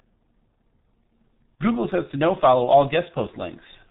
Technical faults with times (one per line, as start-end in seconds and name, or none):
0.00-3.90 G.723.1 codec
1.55-1.59 VoIP packet loss concealed by the speech codec